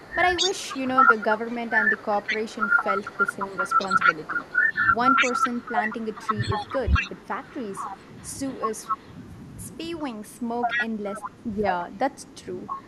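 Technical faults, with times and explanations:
0.0–2.83 s, 3.18–4.71 s, 5.13–7.0 s and 10.02–11.91 s, speech suppressed in double talk: the voice dips by up to about 20 dB in pieces while both sides talk, likely from an echo canceller turning down everything it cannot separate from loudspeaker echo.
0.36–9.08 s, 9.99–10.27 s, 10.61–11.31 s and 12.22–12.87 s, echo leak: a copy of the voice returns 209 ms late, sitting between about 5 and 35 dB below the speech, likely residual loudspeaker pickup the far end's canceller failed to remove.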